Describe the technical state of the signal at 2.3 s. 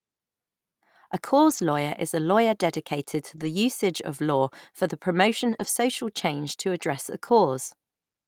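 At 2.3 s the speech signal is intact, with no dropout, clipping, distortion or other technical fault to be heard.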